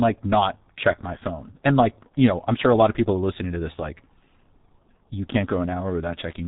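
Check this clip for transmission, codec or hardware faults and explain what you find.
One codec fault runs through the whole speech clip. The G.723.1 codec's coarse 30 ms frames, which fit a 6.3 kbit/s stream, leave it hoarse and consonant-smeared, with nothing above 3.8 kHz. That hoarseness is what separates it from a clean telephone-band filter.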